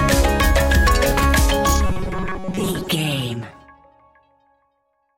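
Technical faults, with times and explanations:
1.86–2.88 s, robotic sound from repeated short buffers: most of this stretch turns into a rigid metallic 188 Hz buzz, likely a 5.3 ms fragment looped; spectrogram shows evenly spaced harmonic stripes.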